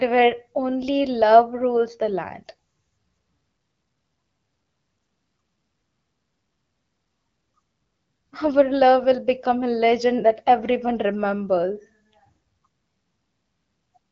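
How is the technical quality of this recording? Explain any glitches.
The speech arrives through an AMR wideband (HD Voice) link at 12.65 kbit/s, with only light coding artefacts and no content above about 7.5 kHz, and there are no glitches or dropouts to report.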